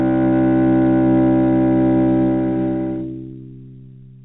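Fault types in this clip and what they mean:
No faults in this clip.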